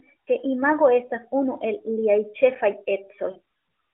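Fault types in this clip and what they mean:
Lost AMR speech frames: two single 20 ms frames, near 1.06 s and 3.32 s, are concealed by the decoder, giving a brief dip or warble rather than a hard silent gap.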